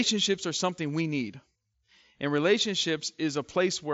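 Speech carried over a Bluetooth mSBC headset link, band-limited at about 7.7 kHz as that wideband path is, with no faults to report.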